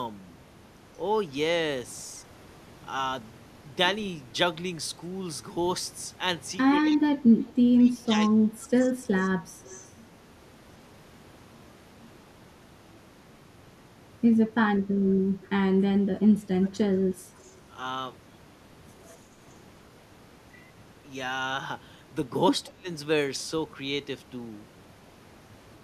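From 6.87 to 8.71 s, and again at 15.04 to 15.5 s, 15.99 to 17.05 s and 22.68 to 22.88 s, the speech dips by about 15 to 25 dB. This is speech suppressed in double talk, likely an echo canceller muting the talker while the far side also spoke. The sound itself is turned down, with nothing added.

Echo leak sits at 8.04 to 8.19 s, 8.75 to 9.89 s and 17.38 to 17.57 s. A faint copy of the speech trails 182 ms behind, about 25 dB down and about 35 dB down at the last one. Unlike the suppression dips, this adds sound. It is likely loudspeaker pickup that the canceller failed to remove.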